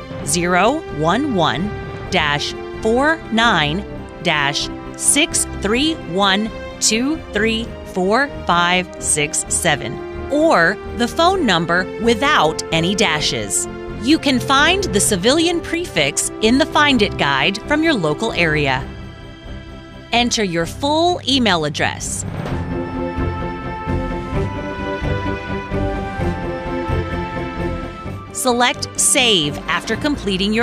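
From 15.74 to 15.84 s the level dips abruptly by about 6 dB, likely one channel drops out; unlike a dropout, it never goes silent.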